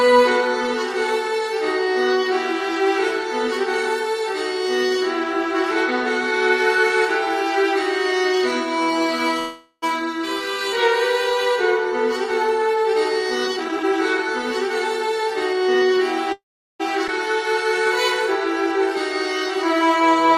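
Call audio freeze at 9.39 to 9.84 s: the sound stalls and the last moment is stretched into a fading buzz, with only about 60 ms of true silence, before resuming where it stopped. That inserts a 0.43 s gap with nothing lost, likely caused by delayed packets draining the jitter buffer.

Jitter buffer speed-up from 13.48 to 14.19 s: the receiver trims pitch-period-sized slices over and over to shed roughly 0.3 s of excess delay, so this stretch plays at 143% speed with unchanged pitch and sounds rushed.

A second call audio freeze at 16.32 to 16.81 s runs longer into quiet. A brief fading tail gives way to about 390 ms of silence, and playback then continues from the same point, now 0.47 s late. Again the likely cause is late packets leaving the buffer empty.

Skip ahead at 17.07 to 17.10 s: roughly 0.2 s of audio is gone, and the sound on either side of the cut is spliced almost directly, with only a 9 ms fill. 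That stretch was dropped while later audio was already queued, which pulls the delay back down.

Jitter buffer slow-down from 19.57 to 20.36 s: single pitch periods and bits of pauses are repeated to rebuild a reserve. This adds 51 ms, so the passage runs at 94% speed at the same pitch and sounds slightly drawn out.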